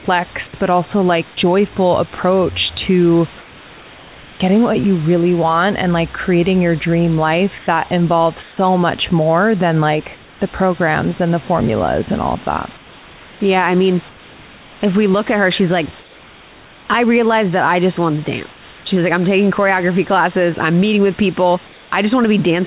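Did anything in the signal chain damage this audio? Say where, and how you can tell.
Yes. At 2.15 to 2.18 s the speech cuts out for 30 ms under steady noise, likely a call-stage voice detector misfire. It is not packet loss, which would leave a gap or click.

The room background turns featureless at 7.58–7.67, 8.42–8.57, 10.16–10.4, 14.09–14.81, 16.01–16.88, 18.53–18.86 and 21.68–21.92 s, up to about 3 dB quieter. That is likely comfort noise from discontinuous transmission rather than a noise gate's silence.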